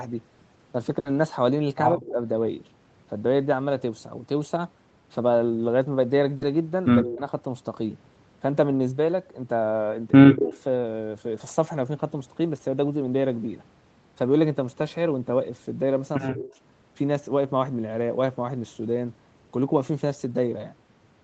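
A burst of packet loss hits at 0.99 to 1.07 s. Consecutive packets arrived too late or not at all, so the receiver extended the last sound for about 60 ms, turning it down as it went, before jumping ahead. Another 60 ms of speech is simply gone. The held portion comes across as a brief buzzy or hissy smear, and the speech resumes with an audible skip.

Speech suppressed in double talk follows at 1.95 to 2.18 s. The talker's level sinks by up to about 15 dB over roughly a fifth of a second. The likely cause is an echo canceller that heard the far side talking at the same time and, unable to separate the two, ducked the near talker along with the echo.

A short concealed packet loss occurs at 6.37 to 6.43 s. About 40 ms never reached the decoder in time. The receiver filled the hole by carrying the preceding sound forward, then blended back into the real signal. The result is a quick wobble or smudge, and a brief consonant there can drop out.

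At 7.02 to 7.22 s the double-talk ducking returns, again pulling the speech down by about 15 dB for around 150 ms. Within it, at 7.05 to 7.13 s, there is an echo leak: a faint copy of the speech trailing about 135 ms behind, around 20 dB under the direct sound. The likely cause is a far-end loudspeaker whose echo canceller let part of the microphone pickup through, so a repeat rides under the talker.

At 10.30 to 10.55 s the suppression is deeper, reaching about 25 dB over roughly 300 ms, likely while the other side speaks.

At 16.30 to 16.52 s a similar dip of about 25 dB lasts roughly 200 ms. In its final stretch, from 16.46 to 16.52 s, a fainter echo leak appears, again delayed by 135 ms but around 30 dB below the speech, as a barely there ghost of what came just before. Throughout the clip the audio stops at 8 kHz, which fits the call codec's bandwidth setting.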